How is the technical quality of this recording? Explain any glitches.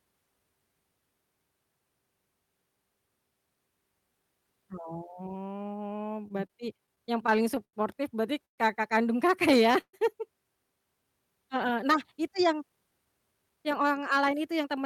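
The recording has four separate kinds of network and buffer trouble, spread through the clip.

At 4.01 s the speech jumps forward slightly. That points to a dropped buffer (overrun). The app most likely didn't pull its samples off the hardware in time, so around 10 ms got overwritten and the two edges were butted together. Nothing goes silent. You just hear a skip in the sound.

From 6.18 s to 7.75 s, just before "berarti kakak kandung", the speech has repeated stalls (stutter). Packets kept arriving late, so the jitter buffer ran dry 13 times. Each time, the receiver stretched the last bit of sound until fresh audio showed up. That patching covers about 0.22 s in total, roughly 14% of the stretch, and the longest hole is 87 ms. Nothing is lost, but the speech drags and hiccups along.

There are two short call audio freezes, at 8.45 to 8.60 s, right before "kakak kandung", and at 9.81 to 9.95 s. 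Packets were probably held up in transit and the buffer emptied. The receiver filled about 0.13 s each time with a fading continuation of the last sound, which ends in real silence, about 110 ms in the first freeze and 60 ms in the second. The speech then resumes exactly where it stopped, so a gap has been inserted rather than anything cut.

From 12.29 s to the end at about 14.82 s there's a jitter buffer speed-up. The buffer was holding more audio than it wanted. To catch up, it snipped out lots of tiny pitch-period slices, around a fifth of a second in all. The pitch stays put, but the speech runs at about 109% speed and sounds noticeably hurried.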